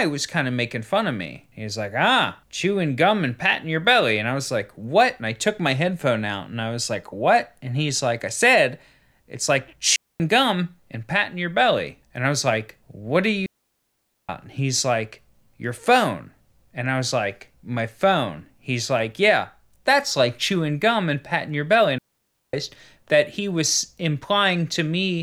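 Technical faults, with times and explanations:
9.96–10.20 s, 13.46–14.29 s and 21.98–22.54 s, digital wireless dropout: the speech cuts to clean near-silence for about 0.24 s after "I said it's like", 0.83 s after "was like what are", and 0.55 s before "that he was", with no noise burst either side. The wireless receiver lost too much data and muted with a very short fade.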